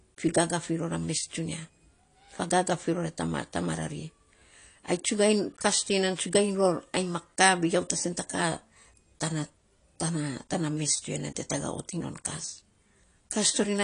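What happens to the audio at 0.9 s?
At 0.9 s the speech sounds dull and smeared, with a warbling, fizzy edge on sustained sounds and sibilants and nothing above about 10.1 kHz, as it does throughout. This is likely AAC compression at a low bitrate, which fits roughly 32 kbps.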